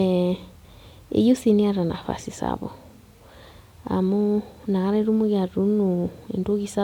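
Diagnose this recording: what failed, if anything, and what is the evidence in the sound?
Nothing in this speech recording stood out as a fault on listening.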